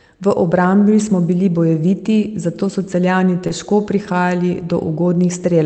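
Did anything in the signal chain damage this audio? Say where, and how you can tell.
Yes. Short concealed packet loss in the network: about 20 ms missed the decoder at 3.47 to 3.52 s, before "težko prihajali", and was patched by extrapolation, leaving a brief smear.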